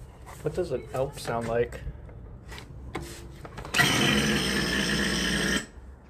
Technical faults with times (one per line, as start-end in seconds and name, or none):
0.33 compressed frames skipped
4.48 compressed frames skipped